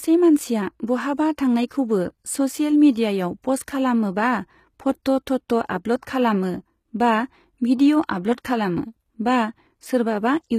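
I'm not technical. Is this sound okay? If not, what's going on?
No. Throughout the recording, s sounds in the speech have a gritty, metallic edge and come out lispy. The likely cause is HE-AAC compression, which rebuilds the treble from lower sounds instead of keeping the real thing. Nothing survives above about 15 kHz.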